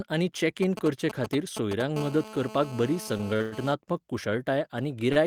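From 0.63 to 1.82 s, GSM signalling bursts: a nearby 2G phone exchanging control traffic sends brief clusters of radio pulses at a 217 Hz burst rate, which the audio circuitry rectifies. They come through as a galloping run of ticks and short buzzes, loud, close to the speech level.

From 1.96 to 3.74 s the phone moves into a call and transmits in regular bursts, giving GSM phone buzz: the steady 217 Hz pulse train is rectified into a hard, raspy buzz full of harmonics, about 15 dB below the speech and unrelated to it.

Within that buzz, a run of short stalls from late packets occurs at 3.17 to 3.35 s, 3.36 to 3.42 s and 3.42 to 3.54 s, and another follows later at 5.12 to 5.18 s. Each time, a packet arrived behind schedule and the jitter buffer emptied. The receiver held the last sound for about 20, 37, 100 and 35 ms respectively, then resumed from the same point, so nothing is lost. The speech briefly freezes and drags, longest at the 100 ms hold.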